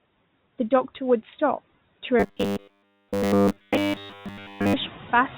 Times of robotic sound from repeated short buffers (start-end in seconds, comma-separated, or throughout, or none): 2.20-4.74